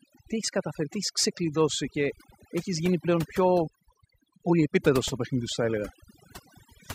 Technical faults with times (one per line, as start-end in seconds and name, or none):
0.00-6.94 overdone noise removal